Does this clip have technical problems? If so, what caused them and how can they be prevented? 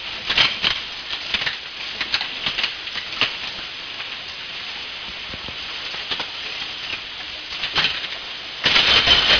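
Yes. Aliasing runs throughout. Content above 5.5 kHz folds back as harsh, metallic tones, about 10 dB relative to the signal. This fits downsampling to 11 kHz without filtering. Prevent it by low-pass filtering below the new half-rate before resampling.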